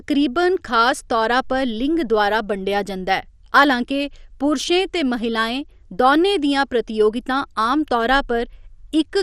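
From start to finish the speech carries plainly audible damage that is likely MP2 compression, at a rate consistent with about 64 kbps. Nothing sounds above 14.4 kHz, and the remaining bands are coarsely quantised, giving a dull, gurgling, granular texture as upper sub-bands drop in and out. A plain low-pass filter would dull the sound without that churning grain, and the steady, band-wise flicker sets it apart from the swirly pre-echo of MP3.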